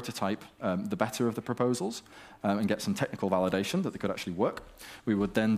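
Nothing in this audio stands out as a technical fault. No dropouts, distortion or timing problems can be heard at any point.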